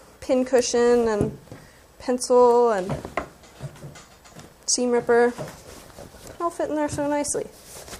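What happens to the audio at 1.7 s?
Nothing goes wrong at 1.7 s: the audio plays through that moment intact, with no dropout, click or other fault.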